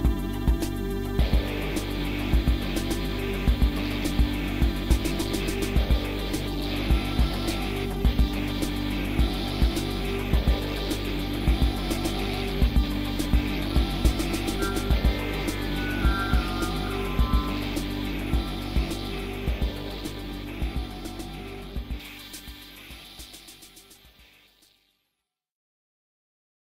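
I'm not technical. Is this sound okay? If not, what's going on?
No. From about 22.0 s to 26.6 s, near the end of the clip, there is pre-emphasis left on. Somewhere in the chain the high frequencies were deliberately turned up, as some recording and transmission systems do. The matching step that should turn them back down on playback never happened. For those last few seconds the sound comes across thin and overly bright, with a harsh, hissy edge on the sharpest sounds.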